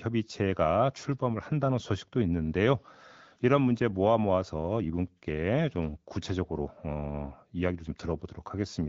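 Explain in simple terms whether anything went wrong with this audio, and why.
Nothing went wrong: the speech passes through the AMR wideband (HD Voice) phone codec as expected, leaving only the light coding trace that codec normally adds at this quality, and no fault can be heard anywhere in the clip.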